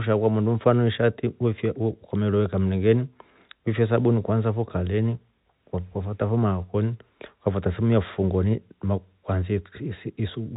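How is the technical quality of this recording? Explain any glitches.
No glitches are audible here.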